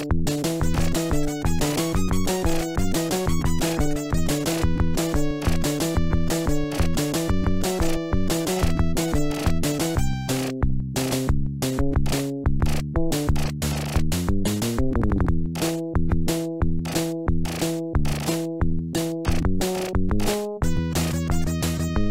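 Nothing technically wrong can be heard anywhere in the audio.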